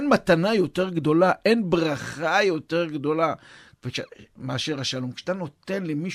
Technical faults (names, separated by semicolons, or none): none